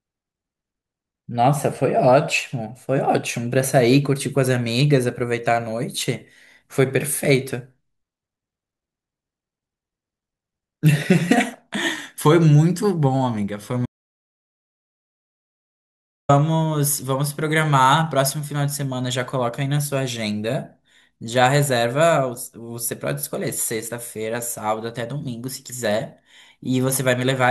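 From 13.86 to 16.29 s an audio dropout to silence leaves a silent gap, likely from a lost input: a flat waveform line and blank spectrogram.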